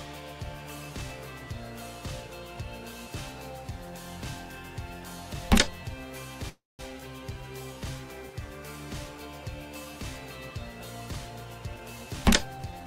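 At 6.49 to 6.82 s a call audio freeze stretches the last sound into a fading buzz and then about 190 ms of silence, likely because packets stalled and the jitter buffer ran empty. The spectrogram shows smeared, unchanging bands fading into a blank gap.

From 11.75 to 12.86 s a jitter buffer speed-up plays the sound at 112% speed with the pitch unchanged. Around 150 ms of pitch periods are cut out, so the waveform is compressed in time while the harmonic spacing on the spectrogram stays the same.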